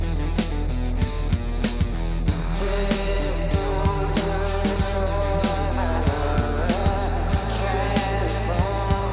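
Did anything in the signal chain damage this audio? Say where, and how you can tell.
No, nothing along the chain audibly damaged this audio. Every stage it passed through left no mark a listener could point to.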